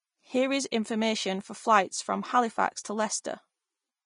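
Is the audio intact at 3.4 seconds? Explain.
No. At 3.4 seconds the speech carries Vorbis compression damage, as it does across the whole clip, likely from encoding at a low bitrate around 31 kbps. The encoder keeps a smooth spectral outline but quantises the treble detail so coarsely that it turns into noise of similar energy, and it discards everything above 10.6 kHz. The result is plainly audible: a hissy, grainy top end with roughened tones and smeared consonant onsets.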